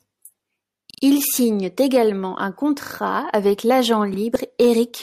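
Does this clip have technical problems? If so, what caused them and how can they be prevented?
Yes. A repeated buffer causes stutters at 0.91–1.03 s, 2.83–2.91 s and 4.14–4.18 s. New audio arrived late, so the same 40 ms piece replayed three, two and then one extra time. Each repeat has a hard join. A larger playback buffer or a higher-priority audio thread would prevent this.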